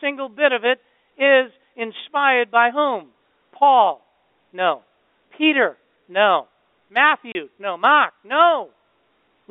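At 7.32 s the speech drops into a 30 ms hole of dead silence, a case of packet loss filled with silence. A single lost packet fits that length, and the receiver inserted nothing in its place. Concealment that smooths over a loss would repeat or fade the last sound instead of leaving plain silence. The telephone band of roughly 250 Hz to 3.6 kHz carries the speech on either side of the gap.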